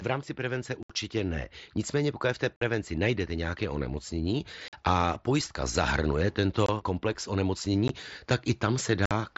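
Unconcealed Bluetooth headset packet loss cuts holes at 0.83–0.90 s, 2.57–2.62 s (after "pokud v té"), 4.68–4.73 s, 6.66–6.69 s, 7.88 s and 9.06–9.11 s. Short voice packets between headset and phone never arrived, and silence or an idle pattern replaced them. The result is gaps of 18 to 68 ms with abrupt edges, heard through the mSBC wideband link.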